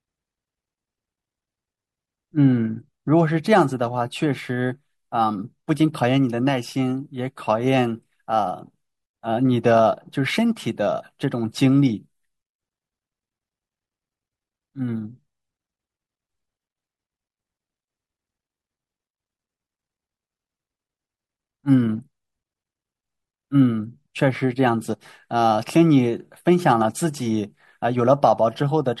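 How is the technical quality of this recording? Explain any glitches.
Technical quality is held back by plainly audible codec damage across the whole speech recording. Likely MP3 compression at a bitrate around 64 kbps gives watery, swirly sibilants; a spectrogram shows flickering gaps.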